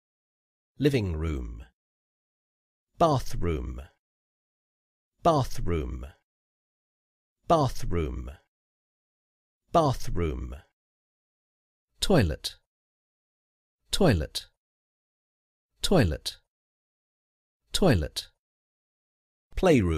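No technical faults can be heard anywhere in the audio, and the signal stays continuous and steady throughout.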